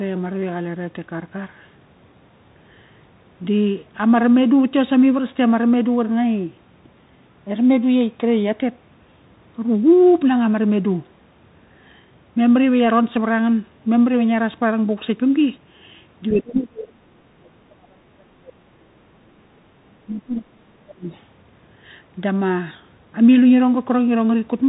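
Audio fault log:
Throughout: Bluetooth CVSD headset codec. One-bit delta coding at 64 kHz leaves nothing above 3.8 kHz, with scratchy sibilants and a grainy hiss. The spectrogram shows a hard ceiling and a speckled noise floor.
16.31–21.11 s: speech suppressed in double talk. The talker dips by around 30 dB, likely from the echo canceller muting during crosstalk. The waveform shows a shrunken, gapped envelope.
21.12–21.2 s: other side's voice leaking through. An 80 ms scrap of a second voice sits far below the speech, likely residual loudspeaker echo. The spectrogram shows a faint, brief smear.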